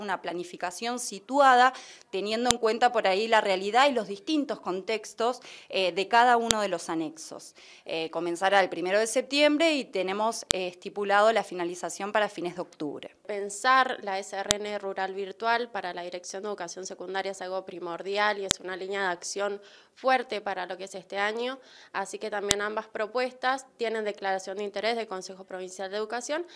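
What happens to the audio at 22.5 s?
A sharp, loud click snaps through the audio at 22.51 s, regardless of what the signal is doing. This is a file header played as audio: WAV pieces were joined with a piece's header intact, so its few dozen header bytes play as samples.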